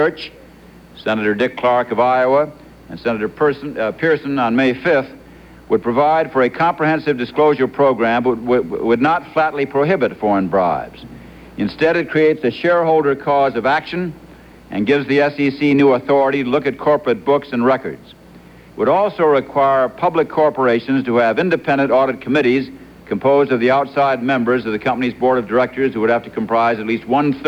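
No technical faults can be heard anywhere in the audio.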